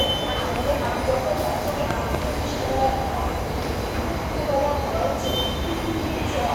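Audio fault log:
0.56–0.58 s and 1.91–2.17 s, loud pop: a single sharp pop first, peaking roughly 10 dB above the sound, then a double pop about 15 dB over it, with the sound carrying on underneath both times. That's a sudden voltage step or spike landing on the signal, likely from a plug, switch, static discharge or driver glitch. The downstream circuitry shapes the pulse.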